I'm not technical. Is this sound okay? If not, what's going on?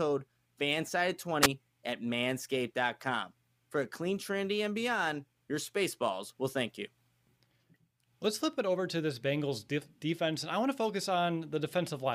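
No, there's a wireless microphone squelch dropout from 1.42 to 1.47 s: the radio signal fades, hiss rises, and the receiver briefly mutes the speech.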